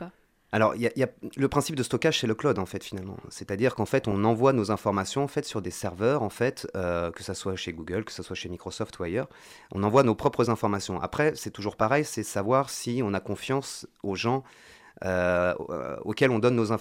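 This speech clip has two short bursts of DAB burbling, at 4.00–4.12 s just before "envoie nos informations en" and at 11.74–11.84 s between "c'est toujours" and "c'est savoir si on". Weak reception let a few bit errors through, so noise blips land in single sub-bands across the 7 and 10 frames hit, giving a burbling sound.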